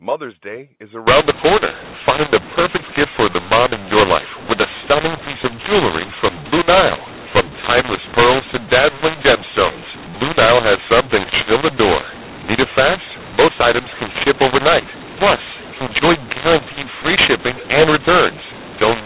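From 1.07 s on, mu-law and A-law are mixed up: mu-law samples decoded as A-law scramble levels. Unlike clipping, distortion covers every level and pauses fill with noise.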